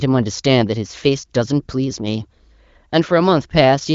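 No faults; the speech is band-limited with nothing above 7.5 kHz, consistent with an AMR wideband (HD Voice) codec path at one of its upper rates, such as 18.25 kbit/s.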